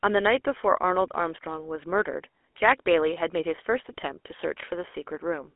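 From start to finish the speech has passed through a GSM full-rate codec, which fits a 13 kbps stream. It rebuilds the voice from a vocal-tract model and a sparse pulse excitation, leaving a plainly audible buzzy, gravelly roughness. Telephone band-limiting to 300–3.4 kHz removes everything above 3.8 kHz.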